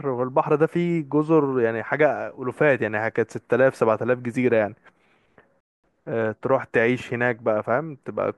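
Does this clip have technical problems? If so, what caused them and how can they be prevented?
Yes: a playback stall at 5.60 to 5.84 s silences speech for 233 ms, likely the player running out of data or its thread being blocked. A larger playback buffer and keeping the audio thread free of blocking work would prevent it.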